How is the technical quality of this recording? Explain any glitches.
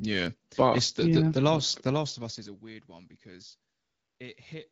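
The recording has one glitch, a stretch of AMR comfort noise. It sits on top of wideband phone coding with light codec damage, which fits AMR-WB at around 12.65 kbit/s.

From 3.71 to 4.19 s, just after "one because", the real background drops out for about 480 ms. The phone judged the talker silent and stopped sending speech frames. The receiver then filled the gap with synthetic noise built from a rough outline of the background's level and spectrum. You hear a steady, smooth hiss that switches in and then out.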